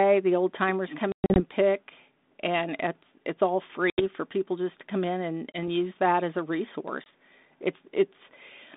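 At 1.12 to 1.41 s, packet loss on an ADPCM call cuts hard-edged silent holes into the speech: 180 ms missing, scattered over 240 ms, longest run 120 ms, around ten packets. Shorter dropouts follow at 3.90 to 4.02 s (80 ms), 5.53 to 5.58 s and 7.04 to 7.07 s (20 ms each). After each gap the decoder's predictor and step size no longer match the sender's, so the returning speech comes back distorted until they realign. The 200 Hz to 3.7 kHz band fits 32 kbit/s G.726.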